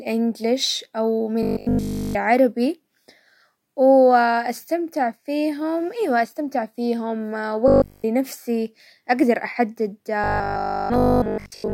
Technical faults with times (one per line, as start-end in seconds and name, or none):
1.43-2.17 robotic sound from repeated short buffers
7.68-8.06 robotic sound from repeated short buffers
10.24-11.73 robotic sound from repeated short buffers